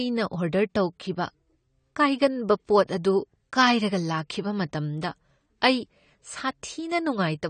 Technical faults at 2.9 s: AAC compression; pre-echo

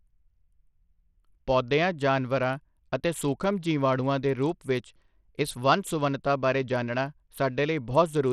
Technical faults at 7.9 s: Bluetooth SBC compression

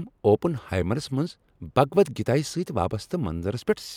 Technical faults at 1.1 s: none

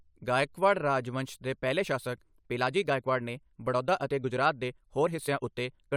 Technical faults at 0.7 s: none

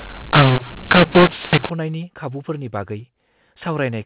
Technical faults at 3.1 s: none

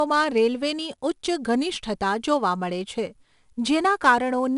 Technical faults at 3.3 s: 4-bit ADPCM compression

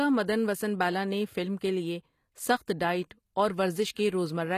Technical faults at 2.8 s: HE-AAC compression

